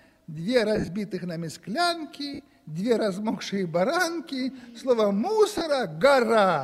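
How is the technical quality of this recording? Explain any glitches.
A few short dropouts from lost LE Audio frames mar the recording. Around 0.76 to 0.88 s, about 80 ms of audio goes missing in patches, with the longest gap a few tens of milliseconds. It happens again at 2.34 to 2.39 s (about 50 ms) and at 5.58 to 5.61 s (about 30 ms). The LC3 decoder papers over each gap by replaying the last spectrum with scrambled signs, so you hear a brief noisy smear rather than a clean gap.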